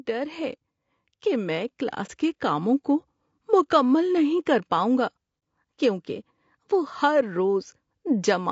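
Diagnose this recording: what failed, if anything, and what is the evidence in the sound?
Low-delay AAC compression, throughout: the speech sounds rough and grainy, with noise between harmonics, which fits a 32 kbps low-delay AAC setting, likely AAC-ELD, at the codec stage.

Automatic gain rising, 0.06 to 1.85 s: call processing gradually lifts voice and background together by about 4 dB, settling just before "کے کاموں کو مکمل".

AAC frame loss with muting, at 2.06 to 2.10 s just before "کے کاموں کو مکمل", and 5.39 to 5.42 s between "نہیں کر پاؤں گا" and "کیونکہ وہ ہر": each is a brief 30 ms dip, which fits a single lost frame that the decoder zeroed.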